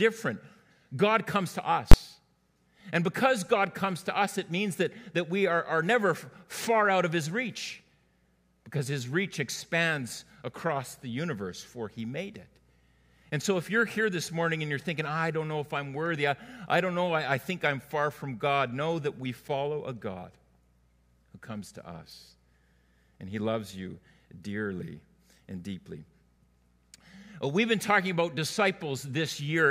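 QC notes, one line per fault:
1.92–1.94 s, invalid numbers at full scale: for a 20 ms block a calculation went invalid and the output was forced to the largest value and held flat there. The jump to full scale and the drop back sit so close together that they fuse into a single very loud bang. Unlike clipping, nothing of the underlying sound survives inside the event. Unlike a dropout click, the gap is filled at maximum level rather than left silent.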